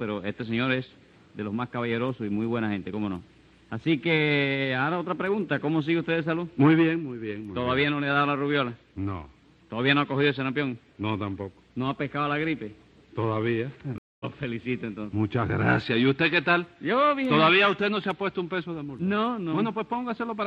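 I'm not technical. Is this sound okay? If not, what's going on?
No. A stream reconnect happens at 13.98 to 14.25 s: the connection dropped, the sound goes silent for about 0.22 s, and the player reconnects and restarts. It picks up roughly a tenth of a second further on, so a small piece is skipped.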